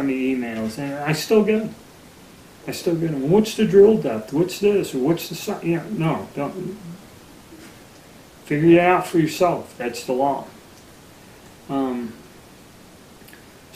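No faults to report: level, timing and continuity hold steady throughout, with nothing dropped, repeated or distorted at any point.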